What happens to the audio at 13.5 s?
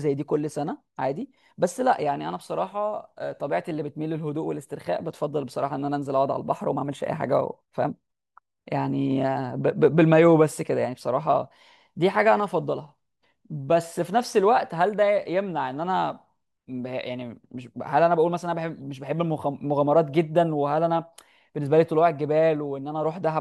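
Nothing goes wrong at 13.5 s; the speech carries on intact through that moment, with no dropout, click or distortion to be heard.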